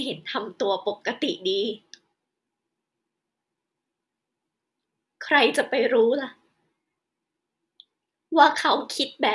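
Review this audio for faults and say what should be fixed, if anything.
Nothing needs fixing, as the signal shows no technical faults anywhere in the recording.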